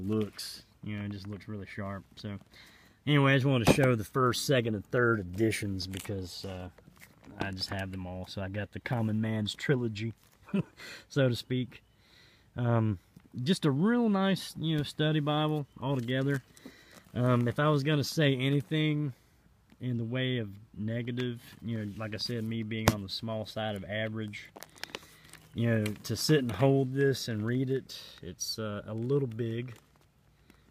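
No technical faults are audible anywhere in this audio.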